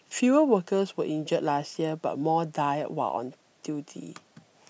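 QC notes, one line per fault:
No faults found.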